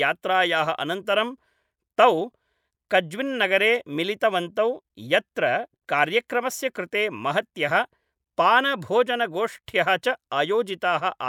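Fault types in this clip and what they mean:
No fault types are present in this clip.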